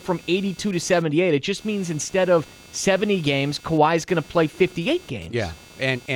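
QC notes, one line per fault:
Throughout, computer activity noise: a buzzing layer pulsing at roughly 200 Hz, around 25 dB below the speech, rising and falling with the computer's load rather than the talking, as processor and graphics current shifts the shared audio ground. Spectrogram shows 200 Hz harmonic striping; waveform shows repetitive spikes in pauses.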